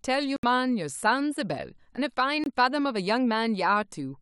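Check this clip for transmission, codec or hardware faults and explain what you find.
Two short gaps interrupt this speech clip, most likely from Bluetooth dropout. The wireless link probably failed to deliver audio packets to the headphones in time, so playback fell silent until usable data returned. The first hole runs from 0.36 to 0.44 s, losing about 70 ms, a length that fits roughly three missing packets. The second, from 2.44 to 2.46 s, loses about 23 ms, consistent with a single packet. Each resumes mid-stream, as though the sound had carried on unheard.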